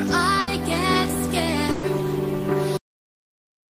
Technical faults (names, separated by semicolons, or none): burst of packet loss; cut-off end